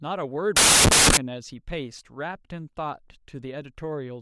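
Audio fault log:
0.57–1.17 s, samples built from the wrong bytes: for about 0.6 s the speech turns into loud, harsh broadband noise, because each sample's bytes are assembled wrongly, so fast-varying low bits dominate.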